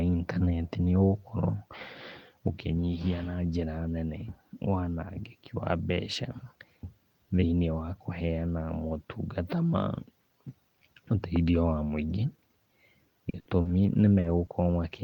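Speech clip, and the trouble sits near the end: from about 13.29 to 14.51 s there's a burst of repeated packet loss that gives the voice that choppy, robotic edge. You can hear five separate holes, the longest around 60 ms, together about 200 ms of lost audio. The receiver papers over them by stretching the last bit of sound, so roughly 17% of that stretch is concealment rather than real signal, and pieces still go missing.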